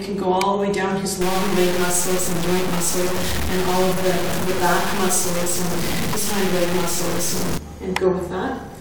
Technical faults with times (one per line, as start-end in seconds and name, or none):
1.21-7.58 low bit depth without dither